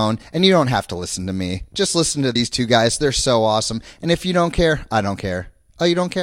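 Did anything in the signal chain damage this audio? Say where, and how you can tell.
Yes. At the codec or storage stage, whole compressed frames were skipped, either missing from the file or rejected by the decoder as damaged. At 2.34 s, between "listen to" and "two guys", the speech jumps forward by about 40 ms, a span consistent with a short run of lost frames.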